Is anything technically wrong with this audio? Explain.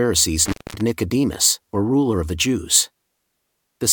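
Yes. Between 0.45 and 0.81 s there is an intermittent contact: a loose cable or plug briefly breaks the signal path, so the speech drops out for about 215 ms, with crackle as the connection opens and closes and faint hiss in the gap.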